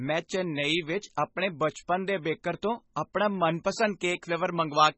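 Throughout the speech, heavy codec damage is heard, likely from MP3 compression at a very low bitrate, around 19 kbps. Nothing sounds above 8 kHz, and the sound is watery and swirly.

From 3.52 s to the end, pre-emphasis is left on. The treble boost, matching the CD 50/15 µs curve, was never undone. The sound turns thin, bright and sibilant.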